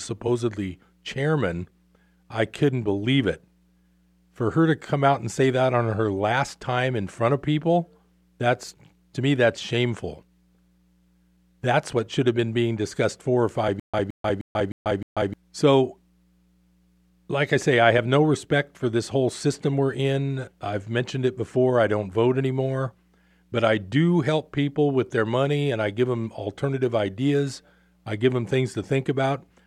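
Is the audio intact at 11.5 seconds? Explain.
Yes, at 11.5 seconds the speech runs on cleanly, with no audible dropout, click, distortion or other fault at that moment.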